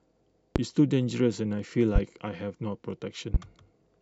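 Speech with three loud pops, at 0.56–0.59 s, 1.96–1.99 s and 3.34–3.38 s. Each single pop jumps about 15 to 20 dB above the speech, which continues underneath. A likely cause is a voltage spike from a switch, plug or static.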